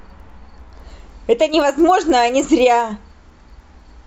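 Throughout the clip, the resampler restarted on every block, converting each 100 ms block without its neighbours' samples, in what points to a 24 kHz to 48 kHz conversion. Every block edge picks up a small error, heard as regular ticks at 10 Hz under the speech.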